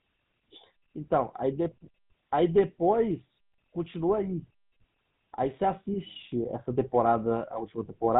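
From start to finish the speech has passed through the GSM full-rate codec, consistent with the original 13 kbps mobile stream. The codec models the vocal tract and excites it with a regular pulse train built from only a fraction of the original excitation, and it discards everything above 3.8 kHz. The result is plainly audible: a muffled, band-limited tone with a buzzy, gravelly roughness laid over every syllable.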